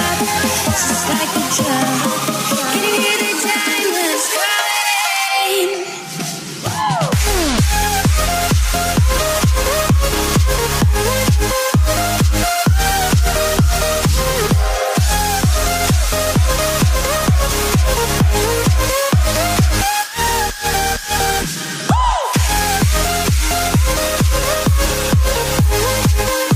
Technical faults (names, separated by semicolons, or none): none